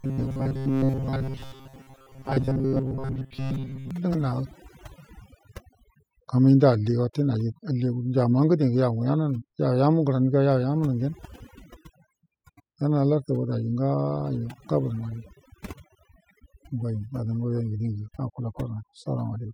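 From 0.01 to 3.9 s the speech collapses into a rigid metallic buzz near 134 Hz, likely robotic sound from repeated short buffers, with a roughly 7.5 ms chunk looping over most of that stretch. Overdone noise removal runs throughout, gating bands so hard the background drops and twinkles.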